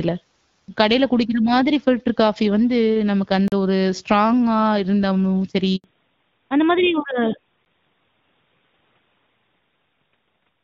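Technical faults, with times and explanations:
3.48 to 3.52 s and 7.65 s, block of digital silence: the output drops to silence for about 40 ms and then about 10 ms, with no fade. The edges are abrupt, so the first is heard as a short hole and the second as a tick.
5.76 to 5.84 s, handover gap: the sound dies away quickly and stays silent for 80 ms while the call switches networks. No speech frames arrive during the switch, so whatever was said in that stretch is lost.
5.84 s to the end, fallback to narrowband: after the handover, everything above 4 kHz disappears and the sound turns duller and rougher. Before the drop, the light wideband coding fits AMR-WB at about 12.65 kbit/s, and the band limit afterwards fits AMR-NB at 12.2 kbit/s.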